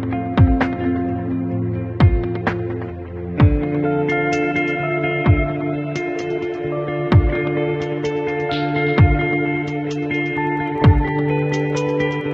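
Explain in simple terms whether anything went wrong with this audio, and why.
Wi-Fi interference got into the audio from about 10.36 s to the end. A nearby Wi-Fi radio sends a short signal roughly every tenth of a second (every 102.4 ms), and the audio circuitry picked up that radio energy and turned it into sound. You hear it as a faint, steady ticking about ten times a second, sitting well below the main audio.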